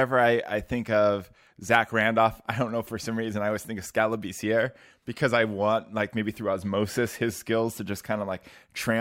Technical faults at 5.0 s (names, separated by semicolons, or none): none